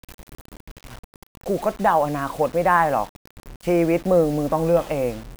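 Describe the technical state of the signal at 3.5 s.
At 3.5 s, as across the whole clip, the speech was likely rounded to about 6 bits without dither. That low bit depth leaves noise only about 25 dB below the signal, tracking it, so quiet stretches sound gritty and grainy, and the softest parts sputter or drop out.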